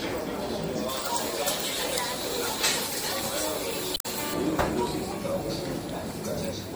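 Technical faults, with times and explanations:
Throughout: MP3 compression. The sound turns watery and swirly, with smeared attacks. This is likely a low bitrate, around 64 kbps.
0.89 to 4.34 s: pre-emphasis left on. The treble was boosted and never cut back, about 11 dB too strong at 10 kHz, which fits a J.17 curve. The sound turns thin and harsh.
3.93 to 4.06 s: damaged data in a compressed stream. Corrupted frames break decoding for about 0.12 s. The decoder loses sync and searches for the next frame header.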